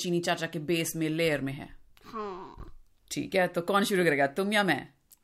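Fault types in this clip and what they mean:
No technical faults can be heard in this speech recording. Nothing in it calls for a fault line.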